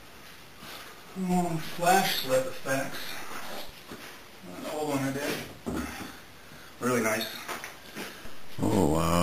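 At 1.32 s a DC step shifts the waveform's zero line by about -35 dBFS, giving a low thump, and it steps back at 3.69 s with a second thump. A similar offset of about -34 dBFS steps in at 8.25 s and holds to the end.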